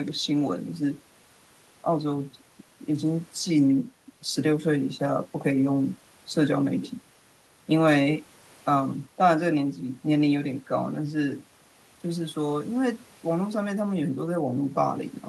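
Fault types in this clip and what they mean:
Nothing in the way of technical faults turns up in this speech recording, so there's no fault type to list here.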